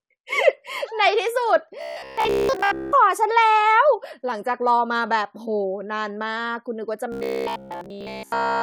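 From 1.82 to 2.92 s, and again from 7.12 s to the end, the speech turns into a rigid, metallic buzz at 66.7 Hz. This is robotic sound from repeated short buffers, likely from audio arriving too seldom and each 15 ms chunk being replayed. Most of the first stretch is repeated material, and all of the last one. Unlike codec warbling, the buzz pitch stays fixed regardless of the talker's intonation.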